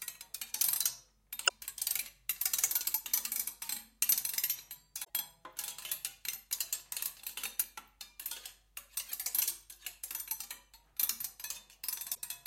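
Damaged data in a compressed stream is heard in this recording of sounds at 1.45–1.51, 5.00–5.09, 9.05–9.13 and 12.11–12.19 s, brief disruptions where corrupted frames made the decoder lose sync and resynchronise.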